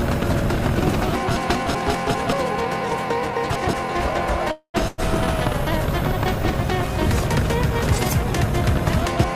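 A call audio freeze runs from 4.51 to 4.76 s. The sound stops moving forward and the last moment is drawn out as a fading tail, which sinks into about 80 ms of silence. The likely cause is packets held up in transit, so the jitter buffer ran dry and the receiver filled about 226 ms on its own. When delivery resumed, playback picked up where it had stopped. Nothing was dropped, but everything after this point now plays about 226 ms later.

A burst of packet loss follows from 4.88 to 5.00 s. Here packets never arrived or came too late to use. The receiver covered the hole by extending the last sound for about 99 ms, turning it down as the gap went on. When playback resumes, it jumps forward rather than continuing, so about 100 ms of audio is missing across the join.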